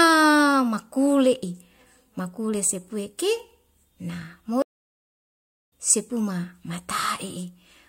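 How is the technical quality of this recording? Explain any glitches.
One glitch mars the speech. At 4.62 s a stream reconnect cuts the audio to silence for about 1.05 s, until 5.73 s. The connection dropped and a fresh decoder restarted mid-stream, so the sound fades back in roughly a second further along. Unlike a plain dropout, it skips ahead rather than resuming where it stopped.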